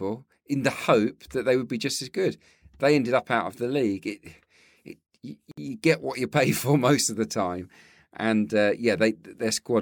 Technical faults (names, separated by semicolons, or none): gap at a join of encoded pieces